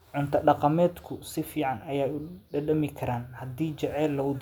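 No technical faults can be heard anywhere in the recording; the speech signal arrives intact, with nothing in its level, continuity or timing that points to a problem in the chain that captured or carried it.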